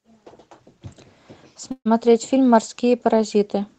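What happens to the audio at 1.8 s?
From 1.71 to 1.87 s the speech stalls: the last sound is drawn out into a fading buzz that sinks to silence for roughly 70 ms, then the speech picks up exactly where it broke off, with nothing skipped. This is a call audio freeze, likely caused by packets arriving late and the jitter buffer running dry, so the receiver improvised about 140 ms of filler and everything after it now plays about 140 ms later.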